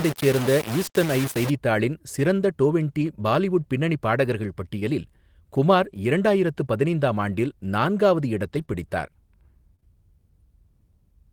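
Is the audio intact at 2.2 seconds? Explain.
Yes, the speech at 2.2 seconds is intact, with no audible fault at that moment.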